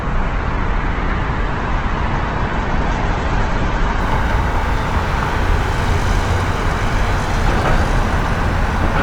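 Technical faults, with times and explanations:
0.00–4.00 s, adaptive stream starting at a low bitrate: the sound is dull, with nothing above 8.2 kHz and heavier codec smearing, then improves abruptly with no gap. This points to the player opening on a roughly 12 kbit/s Opus version before stepping up to about 64 kbit/s.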